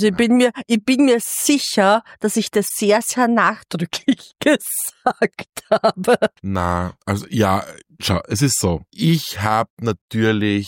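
A brief glitch breaks through the audio at 2.65 s and lasts about 56 ms, ending by 2.71 s. It is the sound of damaged data in a compressed stream: a short run of the encoded bytes at this point was lost, zeroed or overwritten. The decoder could not interpret those frames correctly and lost its sync while searching for the next valid frame header. Normal playback resumed once it found it.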